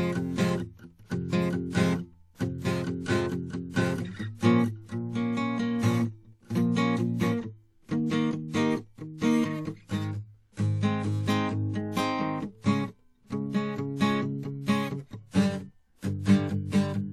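Across the whole music clip there is plainly audible transform-codec damage, likely WMA compression at a low rate, which fits around 48 kbps. Nothing is present above 16.7 kHz, and the quantisation noise gives a ringing, washy texture with hiss that swells and fades with the music.

From 16.20 to 16.26 s a pre-echo appears. The codec spreads the noise meant for a sharp attack back across roughly 59 ms of quiet, so a brief hiss runs ahead of the attack and the attack sounds softened and smeared.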